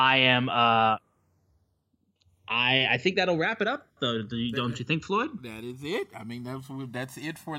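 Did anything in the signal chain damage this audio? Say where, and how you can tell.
Yes, channels drifting apart at the converter stage, throughout the speech: two devices on separate clocks, mismatched by around 150 ppm, let inter-channel delay creep to roughly a millisecond. Summed to mono, this sounds like slow flanging; a spectrogram shows comb notches sweeping gradually downward.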